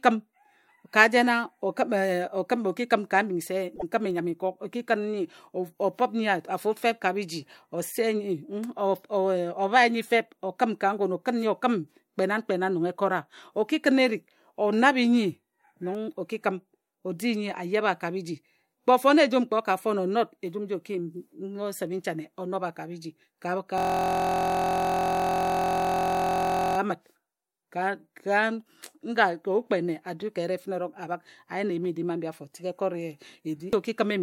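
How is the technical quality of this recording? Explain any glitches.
The speech has two distinct glitches, one tiny and one long.

At 3.75 s there's a brief stutter from repeated frames: a 26.1 ms block plays twice, which fits a single compressed frame being sent again. You hear a quick hiccup, and the audio runs 26.1 ms longer.

From 23.78 s to 26.78 s there's a system hang loop. The machine froze while the sound hardware kept cycling one 23.22 ms chunk, which fits a 1024-sample buffer. It repeats about 129 times and comes out as a steady 43.1 Hz buzz.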